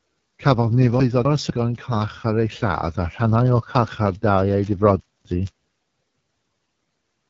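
A speech recording carried over the AMR wideband (HD Voice) codec, with plainly audible damage: the voice sounds rough and raspy, which fits one of AMR-WB's lowest modes, around 8.85 kbit/s. Its pulse-excited vocal tract model captures too little detail at that rate. The spectrum stops at 7.6 kHz. Chunks out of order occur at 1.0 to 1.5 s and 5.0 to 5.5 s: a 250 ms segment plays one chunk late, after the one that should follow it. Each spot is a brief jumbled stretch.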